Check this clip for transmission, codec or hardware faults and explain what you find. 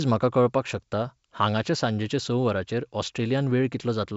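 No faults found here.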